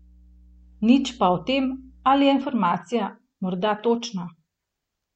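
From the start to 2.19 s, mains hum sits under the speech: a steady 60 Hz tone, roughly 30 dB below the speech, from power-line coupling such as a ground loop. A spectrogram shows a flat horizontal line at 60 Hz that stops at 2.19 s.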